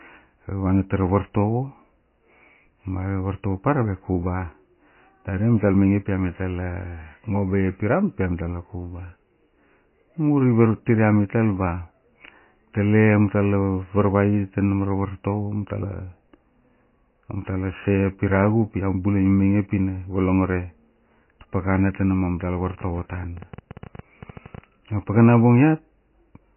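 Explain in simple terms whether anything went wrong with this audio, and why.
Yes. The whole recording sounds dull and watery, with nothing above 3 kHz. That points to heavy MP3 compression, likely from squeezing the file far too small.

From 22.67 to 24.59 s, about twenty uneven ticks, roughly ten per second, play over the speech. This is a train of clicks, most probably electrical interference or a faulty connection.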